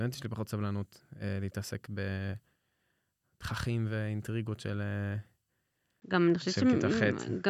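Input switched to a poorer device at 6.0 s, lasting to the end: after a 20 ms gap, the speech turns duller with nothing above 7.6 kHz, shifts modestly in level and carries a faint new noise floor, likely because recording moved to another microphone.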